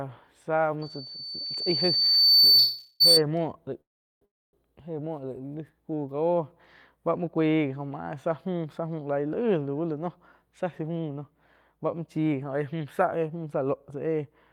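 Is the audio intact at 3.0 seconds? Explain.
No. At 3.0 seconds two faults overlap. A loudspeaker feedback squeal runs from 0.81 to 3.22 s: a piercing 4.5 kHz tone that swells over roughly one and a half seconds until it sits about 10 dB above the speech. The microphone is picking up the loudspeaker it feeds, and at 4.5 kHz the loop gain tops one. That tone keeps growing by itself until it stops, just after 3.2 s.

Under it, a call audio freeze covers 2.58 to 3.02 s. The sound stalls into a fading continuation of the last moment for 416 ms. Then the speech resumes from where it stopped, with nothing lost and everything after it 416 ms late. This is likely packets held up in transit, leaving the jitter buffer empty while the receiver filled the wait with stretched-out sound.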